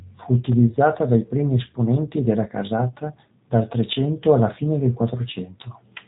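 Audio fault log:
Throughout: G.729 codec. The speech sounds rough and slightly synthetic, with nothing above 3.8 kHz. The narrow band and coarse texture fit an 8 kbit/s G.729A stream. It rebuilds each frame from a vocal tract filter, a pitch predictor and a few pulses.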